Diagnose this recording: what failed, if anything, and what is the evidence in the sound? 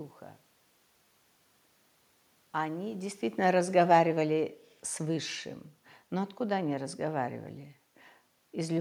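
Automatic gain falling in the call processing: from 3.38 to 4.51 s the AGC pulls the level down about 4 dB, voice and room noise sinking together.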